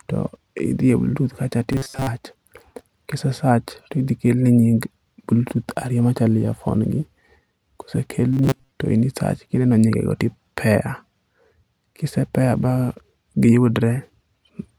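At 1.73–2.07 s and 8.33–8.71 s, just before "to in", robotic sound from repeated short buffers, likely a looped 7.5 ms slice replacing most real audio, creates a metallic 134 Hz buzz. The spectrogram shows flat, evenly spaced harmonic lines.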